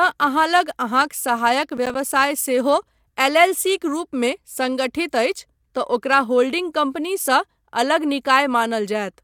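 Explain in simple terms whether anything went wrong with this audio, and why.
A short gritty crackle tears through the speech between 1.70 and 1.95 seconds. This is processor overload crackle: the computer fell behind and missed about five tiny chunks of audio, each roughly 10 milliseconds long, leaving brief hard-edged silent gaps.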